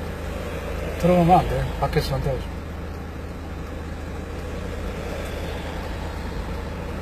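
HE-AAC compression throughout: nothing above 14.9 kHz, and the top end is rebuilt from copied lower bands, likely at a very low bitrate near 20 kbps, sounding gritty and metallic.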